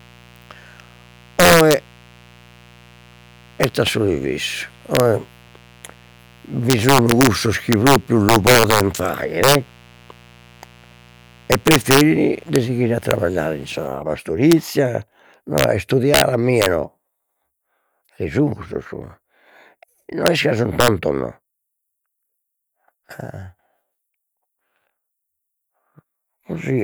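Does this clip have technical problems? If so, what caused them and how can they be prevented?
Yes. Integer overflow runs through the whole speech clip. The signal is pushed about 6 dB past full scale, and the peaks that go over wrap to the opposite sign instead of being limited. The loudest syllables produce violent cracks that are harsher than clipping. On a waveform, a small fraction of peaks jump from the top rail to the bottom. On a spectrogram, those moments show as thin broadband vertical lines. Prevention: use saturating arithmetic or a limiter before the integer conversion, and leave headroom in gain staging.

Mains buzz is present from 0.00 to 13.88 s. Switching spikes from a dimmer, a rectifier or an unshielded cable enter twice per cycle of the 60 Hz supply. The result is a steady, raspy buzz roughly 30 dB below the speech. A spectrogram shows a comb of horizontal lines at multiples of 60 Hz reaching up to several kHz. 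The waveform shows a repeating spiky ripple between words. Prevention: keep dimmers and power supplies away from the audio chain, and use shielded, balanced cabling with proper grounding.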